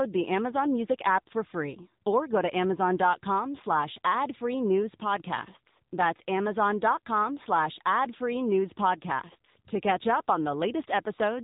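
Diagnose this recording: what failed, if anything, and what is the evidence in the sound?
The codec stage is at fault: the speech passed through the AMR narrowband mobile codec (AMR-NB) for its whole length. Nothing above 3.8 kHz survives, and the codec damage from rebuilding speech with a vocal-tract model and sparse pulses is plainly audible, which fits a mode near 8 kbps.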